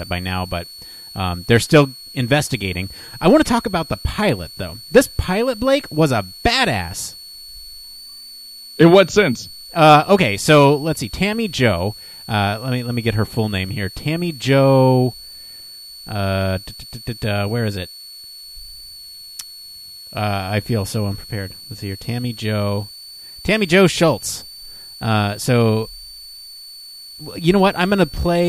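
Throughout the speech, a switching supply whistle sits roughly 20 dB down, wandering between 4.37 and 4.54 kHz; that drifting pitch separates it from a fixed interference tone.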